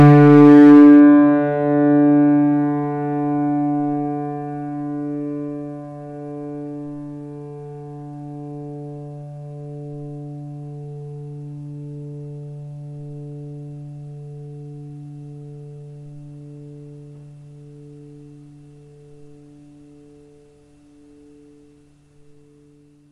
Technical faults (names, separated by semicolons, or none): hard clipping